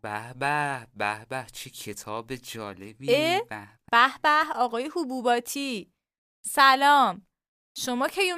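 No faults detected anywhere in the speech recording.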